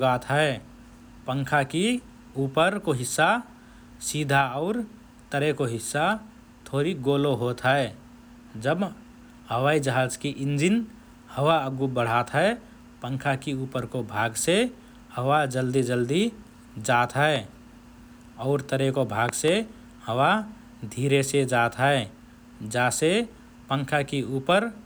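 At 17.36 to 17.38 s a single loud pop sits over the speech, peaking roughly 10 dB above it. Just after "और तरेको", from 19.29 to 19.50 s, a double pop follows, roughly 15 dB above the speech. Both are likely an electrical pulse from a plug, switch or static discharge entering the chain. The speech carries on underneath. On a waveform each pop is a tall, isolated spike. On a spectrogram each shows as a thin vertical broadband stripe.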